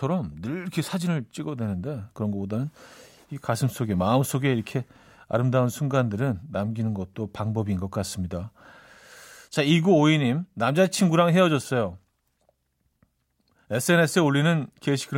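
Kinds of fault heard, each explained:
No kinds of fault are heard in this clip.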